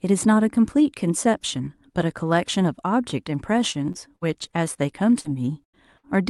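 From 3.71 to 4.77 s, repeated packet loss (robotic sound) breaks up the speech. Five gaps, the longest 55 ms, were filled by continuing the last sound, so the audio turns choppy with pieces missing. At 5.21 s, a short concealed packet loss patches about 40 ms with extended sound. It is heard as a brief smear. From 5.64 to 6.17 s, repeated packet loss returns more heavily. Four gaps, the longest 90 ms, are concealed, covering about a third of that stretch. The result is a choppy, broken texture. The audio carries the coding character of a call codec, which fits Opus at about 48 kbps with a top near 12 kHz.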